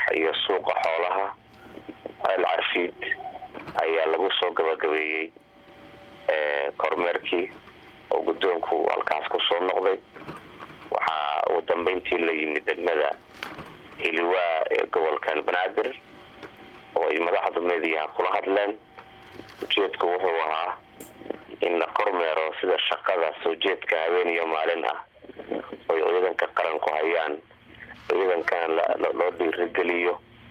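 No technical faults are audible.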